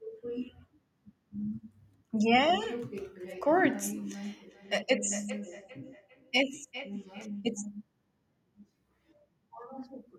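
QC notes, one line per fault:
4.23–7.46 s: feedback echo between two devices. The speech comes back at a steady gap of roughly 0.4 s, peaking about 16 dB below the direct sound. A second nearby device replays it into the microphone, where the local echo canceller cannot remove it.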